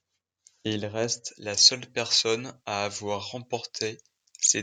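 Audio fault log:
1.25 s to the end: pre-emphasis left on. The treble was boosted for transmission and never cut back, leaving 10 kHz about 11 dB above 1 kHz. The speech turns thin, bright and hissy on sibilants. The tilt fits a J.17 curve.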